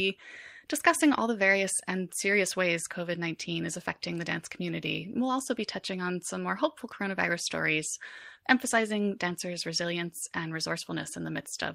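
No technical faults are audible anywhere in the speech recording.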